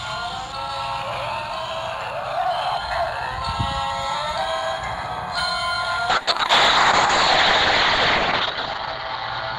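At 6.11 s a call bitrate drop begins: the bandwidth estimate collapses and the encoder falls from 96 kbps to 6 kbps, staying at the floor for about 2.1 s. Audio bandwidth narrows from 20 kHz to 8 kHz, so the sound turns muffled, rough and watery through to the end.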